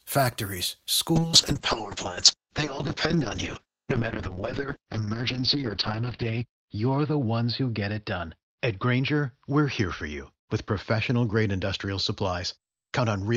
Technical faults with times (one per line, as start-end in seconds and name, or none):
1.16-13.37 call bitrate drop